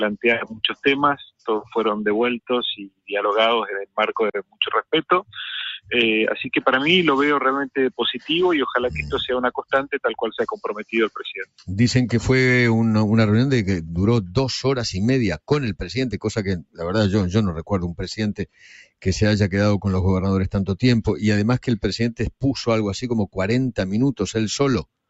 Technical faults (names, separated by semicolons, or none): sound cut by the noise suppressor